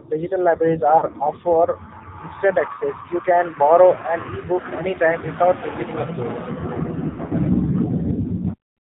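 Throughout the recording the speech carries the sound of the AMR narrowband mobile codec. Nothing passes above 4 kHz, so a spectrogram shows a hard ceiling with empty space above it. The codec rebuilds the voice from a vocal tract model driven by sparse pulses, and that gives the plainly audible buzzy, synthetic timbre of a low-rate mode, which fits roughly 7.4 kbps. The harmonics look smeared and coarse rather than cleanly striated.

Lost AMR speech frames interrupt the sound at 0.98 to 1.04 s. This 40 ms gap points to two frames that failed their checksum. The decoder fills the gap by repeating the last good pitch and vocal tract settings at falling gain, which produces a brief dip or warble. On a waveform the envelope sags for an instant. The spectrogram shows a short stretch of frozen, fading harmonics.

From 7.10 to 7.32 s a second cluster of lost frames is scattered over about 200 ms. 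Around 100 ms of audio is missing, and the longest unbroken run is 40 ms. The sound stutters and warbles repeatedly as concealment keeps stepping in, and the voice comes back weak or rough for a moment. The waveform shows several notches in the envelope. The spectrogram shows repeated smeared, frozen slices.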